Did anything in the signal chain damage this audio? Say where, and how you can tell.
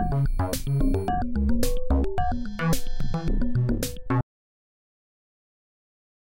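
Yes. An audio dropout to silence begins at 4.21 s and runs to the end. The sound cuts off mid-flow into dead silence with no room tone, so the input was likely lost (a disconnected device, failed link or stray mute) while recording continued. The waveform goes flat, and the spectrogram turns blank.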